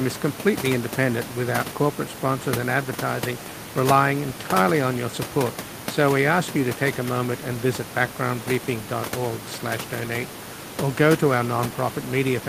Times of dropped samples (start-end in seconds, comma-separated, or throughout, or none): none